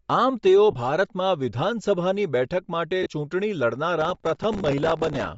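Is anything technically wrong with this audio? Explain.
Yes. The speech carries three kinds of fault.

Throughout, likely Bluetooth LC3 compression, fitting about 32 kbps with 10 ms frames: breathy, grainy highs, and a spectrogram shows the upper band patchy and noise-filled.

Lost LE Audio frames occur at 0.71 s (20 ms), 3.03 s (30 ms) and 4.62 s (20 ms). The decoder repeats the last spectrum with scrambled phase, giving brief noisy smears that show as blurred vertical strips.

Processor overload crackle runs from 4.01 to 5.26 s. Many buffers of a few milliseconds miss their deadlines and are replaced by old audio, producing gritty tearing. The waveform shows dense hard-edged discontinuities, and the spectrogram shows vertical clicks.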